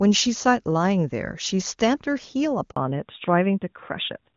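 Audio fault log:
2.70–2.76 s, handover gap: the sound cuts out abruptly and leaves 60 ms of silence before resuming. The call was being passed from one network link to another, and no speech frames arrived during the switch, so that stretch of audio never reached the listener.
2.76 s to the end, fallback to narrowband: after the gap the speech turns duller and rougher, with nothing left above 4 kHz. The clear wideband sound before the switch fits HD Voice at its top rate. The call then came back on an older narrowband codec, which fits AMR-NB at 12.2 kbit/s and strips out the upper band.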